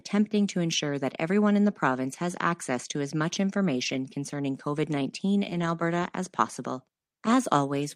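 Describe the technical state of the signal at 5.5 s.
From 5.49 to 5.67 s, packets were lost and the decoder rebuilt them from the low-bitrate copies carried in the following packets, a lost packet rebuilt from error correction. About 100 ms of rebuilt audio, which fits roughly five packets, plays without a gap but sounds rougher and noisier just before "as possible".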